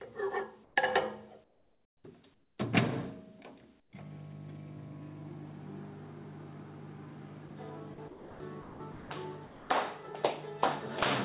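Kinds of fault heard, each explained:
Comfort noise in place of the background: pauses likely filled with synthetic noise, so the real background turns into smooth, featureless hiss, sometimes up to about 14 dB quieter, appearing as flat, uniform texture on a spectrogram.
Sound dropped by the voice detector: quiet sound likely mistaken for background and not sent; briefly at 7.48 s and from 9.46 to 9.7 s it vanishes into steady noise, leaving a flat gap in the waveform.
Sound chopped by the voice detector: sending likely switched on and off repeatedly between 7.94 and 9.1 s, so the sound breaks up; the spectrogram alternates detailed bursts with patches of even, structureless noise.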